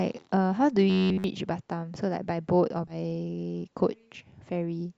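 At 0.31 s the speech jumps forward: compressed frames skipped, here one 20 ms frame never played. From 0.90 to 1.24 s the speech becomes a rigid, metallic buzz near 94 Hz that still roughly follows the syllables. This is robotic sound from repeated short buffers, likely caused by audio arriving too seldom, so a slice of about 10.7 ms is looped in place of fresh material. At 2.87 to 2.96 s a second skip removes about two frames, roughly 40 ms of speech.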